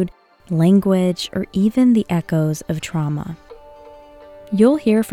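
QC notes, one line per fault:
No faults found on listening; nothing to log.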